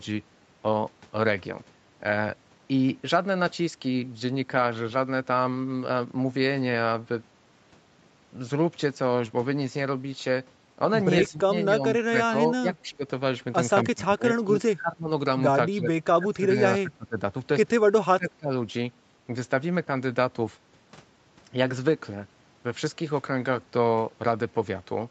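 Speech captured through a call's microphone processing, with nothing above 8 kHz. During double talk the echo canceller likely could not separate the talker from loudspeaker echo, so it turned both down. The result is speech suppressed in double talk at 11.29–13.04, 13.85–15.09, 15.70–17.18 and 18.01–18.51 s, where the voice sinks by roughly 15 to 25 dB.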